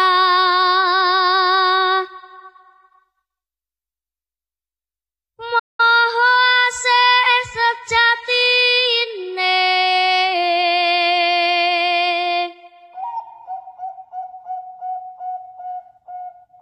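The audio has one playback stall. At 5.59 s the sound stops dead in mid-flow. Silence lasts about 0.2 s, until 5.80 s. The sound then picks up again. The likely cause is the player running out of buffered data or its thread being blocked briefly.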